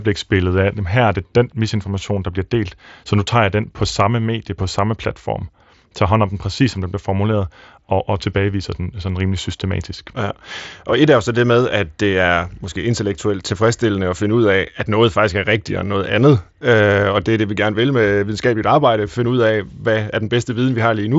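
No technical faults are audible.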